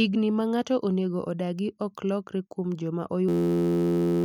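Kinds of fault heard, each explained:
System hang loop: from 3.29 s to the end, the speech gives way to a steady, harsh buzz at about 86.1 Hz, made by a single 11.61 ms fragment repeating exactly, over and over. The computer or driver stalled while the sound hardware kept replaying the same ring buffer, whose length fits a 512-sample buffer. Because that loop is so short, it fuses into a tone rather than a stutter, and about a second of real audio is lost.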